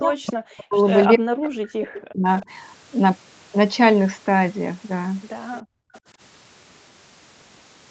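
From the start to 0.79 s and again from 1.08 to 2.27 s, the talker's voice sinks by roughly 40 dB, for about 0.7 s and then about a second in all. This is likely speech suppressed in double talk, where the echo canceller, unable to tell the near voice from loudspeaker echo while both sides spoke, pulled everything down.

At 1.94 to 2.01 s and 2.4 to 2.46 s, brief faint scraps of the voice return about 295 ms late, some 20 and 25 dB below the speech. This is likely echo leak, where the far end's loudspeaker sound reached its microphone, slipped past an incomplete cancellation, and was sent back.

From 5.62 to 5.93 s the room sound drops out, falling by about 33 dB for roughly 0.3 s before coming back. This is background gated by the echo canceller, which clamped the microphone hard while the loudspeaker was playing and then released it.

Right after, from 5.94 to 6.0 s, another short, quiet echo arrives about 300 ms behind the voice, roughly 30 dB down. 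This too is likely echo leak from the far side's loudspeaker pickup.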